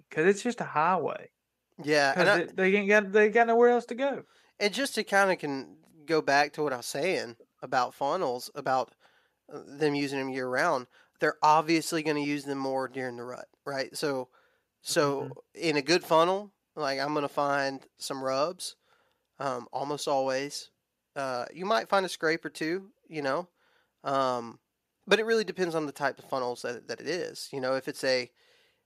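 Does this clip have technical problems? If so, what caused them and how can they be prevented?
No, no technical faults here.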